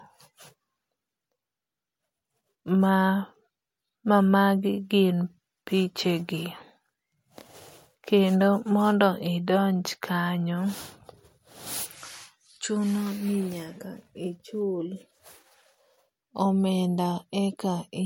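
Throughout, the speech stops at 16.6 kHz and carries low-rate coding artefacts that a true high-bitrate file wouldn't have. This is likely low-bitrate audio saved at a high bitrate, which fits a 64 kbit/s MP3 source.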